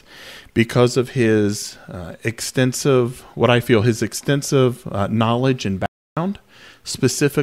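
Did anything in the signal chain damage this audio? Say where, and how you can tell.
Yes. At 5.86 s, right after "extensive uh knowledge and", the speech stops dead and the track falls to silence, with no room tone or noise floor, until it resumes abruptly at 6.17 s. About 0.31 s of speech is simply missing. This is an audio dropout to silence, likely at the input stage: the device or link feeding the recorder stopped delivering samples, and the recorder kept writing silence across the gap.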